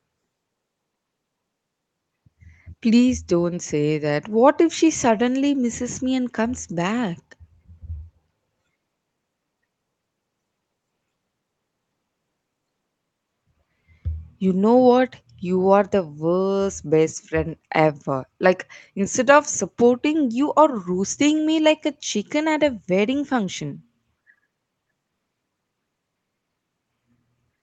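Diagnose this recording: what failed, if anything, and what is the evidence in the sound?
Nothing stood out on listening: the speech keeps the narrower top end, with nothing above about 8 kHz, that fits a call microphone and a WebRTC Opus path at around 20 kbps, and no stage in the chain announces itself beyond that.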